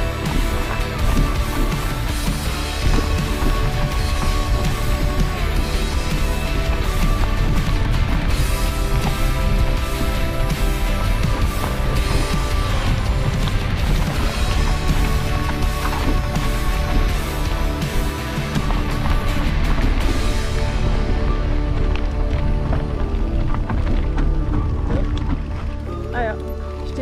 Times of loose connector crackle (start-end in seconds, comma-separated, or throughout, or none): none